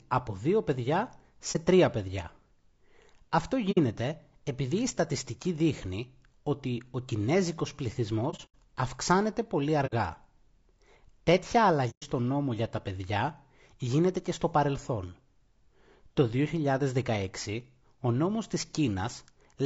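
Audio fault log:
throughout, low-delay AAC compression: the speech sounds plainly rough and grainy, with noise between harmonics, likely from AAC-ELD coding at 32 kbps, which fits a video-call codec.
1.52 to 12.03 s, AAC frame loss with muting: soft-edged dropouts occur at 1.52 s for 30 ms, between "από δύο παιδιά" and "τρία παιδιά"; at 3.71 s for 60 ms; across 8.30 to 8.55 s, where 150 ms is lost over 240 ms with the longest gap about 100 ms, between "ότι ο κινέζικος" and "αυξάνεται πολύ"; at 9.86 s for 60 ms, after "αυξάνεται πολύ"; and at 11.90 s for 120 ms. The decoder zeroes the missing spectrum, and the overlapping windows fade the sound out and back in.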